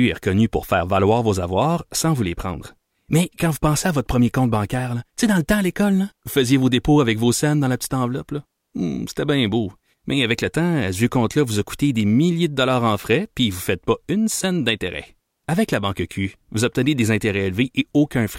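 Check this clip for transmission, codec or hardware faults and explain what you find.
Nothing stood out on listening to this speech recording.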